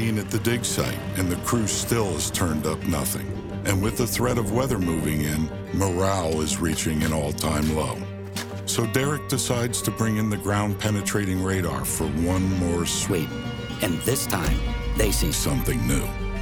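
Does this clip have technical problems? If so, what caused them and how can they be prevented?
Yes. From 13.10 to 15.33 s the sound jumps higher and hurried, about three semitones up: a section at the wrong speed, running 1.22 times too fast, likely from a clock mismatch in editing or playback. Keeping every stage locked to one sample-rate clock prevents it.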